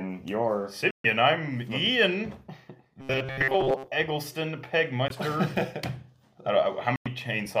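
The audio drops out three times in what is likely a Bluetooth stall: silences of 135 ms at 0.91–1.06 s, 19 ms at 5.08–5.12 s and 96 ms at 6.96–7.08 s. Each appears as a flat gap in the waveform and an empty vertical band across the spectrogram before the sound resumes. From 3.00 to 3.88 s the sound turns into a rigid metallic buzz at 134 Hz, likely robotic sound from repeated short buffers. A fragment of about 7.5 ms keeps looping over most of that stretch, so the waveform shows identical repeating cycles and the spectrogram shows evenly spaced horizontal harmonic lines.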